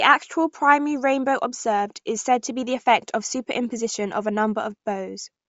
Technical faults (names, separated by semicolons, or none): Bluetooth LC3 compression